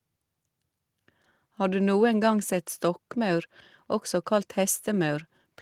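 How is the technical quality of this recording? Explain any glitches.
The speech recording has no audible technical glitches, with the signal staying steady and intact throughout.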